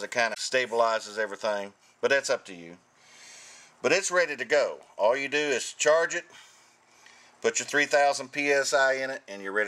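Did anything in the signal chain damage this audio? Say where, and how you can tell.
Yes: damaged data in a compressed stream at 0.30–0.38 s and again at 4.46 s, a codec-stage fault. Corrupted bytes made the decoder misread those frames and lose sync while hunting for the next frame header, leaving short garbled blips.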